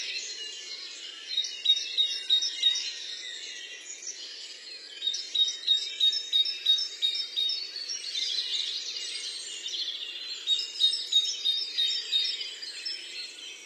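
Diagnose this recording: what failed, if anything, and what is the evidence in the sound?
An adaptive stream starting at a low bitrate, at the network and codec stage: from 0.0 to 6.0 s the treble is thin and synthetic, with nothing above 11.4 kHz and stronger codec artefacts, fitting a 12 kbit/s HE-AAC start. At 6.0 s quality jumps to 96 kbit/s AAC-LC with no gap, unlike a rebuffering stall.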